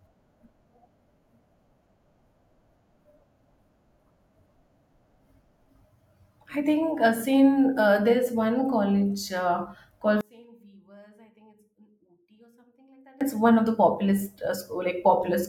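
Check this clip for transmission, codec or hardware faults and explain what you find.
One fault, between 10.21 and 13.21 s. The likely cause is one channel inverted: one stereo side's polarity flipped, so everything common to both sides cancels when they are summed to mono. The speech falls by about 32 dB, leaving only a faint residue of the channel differences, until it returns at 13.21 s.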